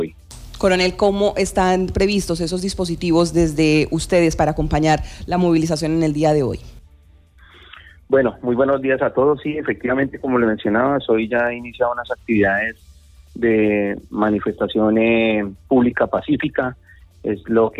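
Nothing is technically wrong with the audio in this clip.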